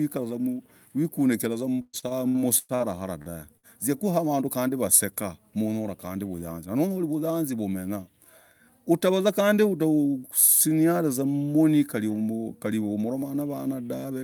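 Repeated packet loss, giving a robotic sound, runs from 1.81 to 2.83 s. Six gaps open in quick succession, the longest 118 ms. Each is patched by extending the preceding sound, so about 38% of that stretch is synthetic fill and roughly 240 ms of speech never arrives. The result is choppy, with pieces missing.

A short stall from a late packet follows at 3.22 to 3.32 s. The jitter buffer ran dry while waiting, so the receiver stretched the last sound for about 41 ms, then resumed exactly where it left off. Nothing is lost, but one sound hangs slightly too long.

A burst of packet loss hits at 3.57 to 3.66 s. Around 60 ms of audio failed to arrive in time. The receiver held the last sound as a fading buzz or hiss for 60 ms and then jumped ahead, skipping the 60 ms in between.

Jitter buffer speed-up occurs from 6.33 to 6.69 s. Having built up surplus delay, the receiver trimmed many tiny pitch-period slices, around 50 ms in all, so the speech runs at about 114% speed without changing pitch and sounds briefly rushed.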